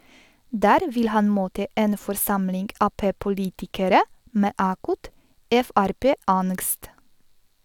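No technical faults can be heard in this recording.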